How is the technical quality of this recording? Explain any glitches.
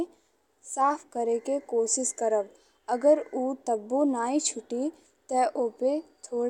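No glitches or faults heard.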